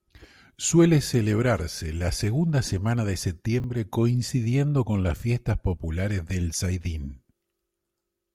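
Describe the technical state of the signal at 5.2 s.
Chunks out of order occur between 5.16 and 5.22 s. Over this 60 ms span, one 20 ms block of the speech arrives two blocks late, so the two blocks that should follow it play first and the delayed block lands after them. No audio is lost, but the sequence is scrambled and the rearrangement creates three hard joins. The result is a brief garbled, jumbled moment.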